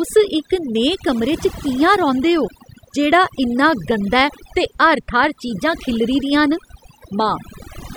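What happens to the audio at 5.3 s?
At 5.3 s you're hearing overdone noise removal, and it runs through the whole clip, not just that moment. A noise reducer pushed too hard is pulling down or gating off any frequency bands close to its noise estimate, so quieter parts of the speech get stripped too. The background sinks and breaks up into twinkling, warbling specks.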